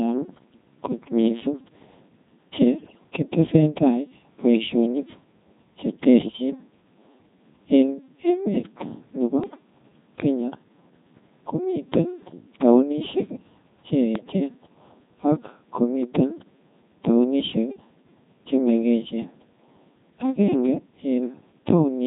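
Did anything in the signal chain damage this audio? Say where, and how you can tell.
Yes. A Codec 2 vocoder at the codec stage shapes the whole clip. The speech is synthesised rather than carried: the decoder rebuilds each frame from a pitch value, voicing decisions, an energy level and a coarse spectral envelope, then sums sine waves. The original waveform is gone, so the voice comes out robotic and buzzy, with heavy damage. That level of damage fits a rate around 2.4 kbit/s.

Bit errors on digital voice radio hit the transmission stage at 2.78 to 3.04 s, 9.44 to 9.63 s and 14.16 to 14.40 s. In each burst the synthetic voice lurches in pitch, loudness and tone colour and breaks into warbles and robotic gibberish. At such a low rate every flipped bit corrupts a whole frame's parameters. The first burst is the worst, with an error rate of several percent.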